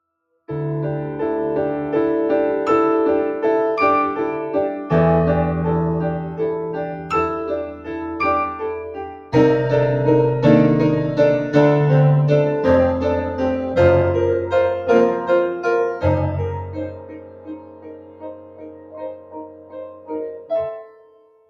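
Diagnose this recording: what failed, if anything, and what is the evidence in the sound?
A speech noise suppressor in the call-processing stage was left running on non-speech audio. The level pumps and thins throughout, with the gain swinging by around 20 dB as the processor keeps deciding whether the material is noise. Sharp onsets pass largely intact while sustained parts and decays sink. That onset-versus-sustain pattern separates it from a simple gain ride or compressor, which would follow overall level rather than treat steady sound as noise.

The sound was cut by the noise suppressor at 6.95–7.1 s (about 5 dB), 7.64–8.19 s (about 10 dB), 8.75–9.34 s (about 12 dB), 13.24–13.4 s (about 5 dB), 14.42–16.04 s (about 11 dB), and from 16.47 s to the end (about 13 dB). Each dip hits steady or fading sound. Because the loss is partial and attacks survive, these are not dropouts from a network or buffer fault, which would leave hard gaps.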